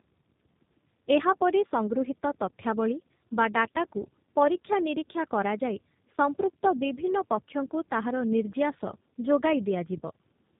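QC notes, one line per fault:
Throughout: tandem speech coding. It sounds like two low-rate speech codecs in a row, likely iLBC then G.729A with a G.711 hop between, each re-coding the last one's damage. The result is rough, warbly and muffled, with nothing above 3.8 kHz.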